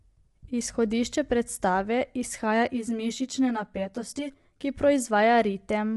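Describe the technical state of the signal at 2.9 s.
Channel delay (comb filtering) is active at 2.9 s, within a span from 2.66 s to 4.64 s. One channel arrives roughly 10 ms behind the other, and when the two are folded to mono, whatever they share cancels at a series of evenly spaced frequencies, the first near 40 Hz and then repeating up the spectrum. Those fixed notches give the speech a hollow, phasey colouring that starts and stops at the span's edges.

Underneath, and present across the whole clip, is plainly audible low-delay AAC compression, likely AAC-ELD at around 32 kbps. Its short frames resolve the voice's harmonics poorly at this rate, so the speech sounds rough and grainy, with noise filling the gaps between harmonics. Nothing reaches above 11.6 kHz, so the top band is cut off and sounds dull.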